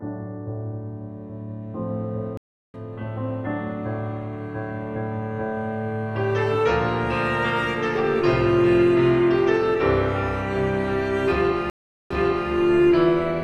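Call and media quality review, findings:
Stream reconnect, 2.37–2.77 s: 365 ms dropout; audio resumes roughly 0.3 s further on, so material is skipped. Connection dropped; player reconnected and restarted its decoder mid-stream, joining at the live position. Stream reconnect, 11.70–12.50 s: 405 ms silence, then playback resumes 400 ms earlier, repeating audio already heard. Server resent a buffered burst after reconnect; fresh decoder start fades in the first frame.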